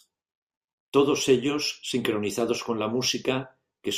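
The speech recording has no audible technical faults anywhere along its length.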